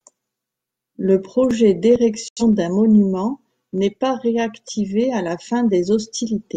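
Speech clip with a digital broadcast dropout from 2.28 to 2.42 s. The sound mutes, just before "d'un monument n'est pas". That fits about two corrupted frames discarded by the receiver.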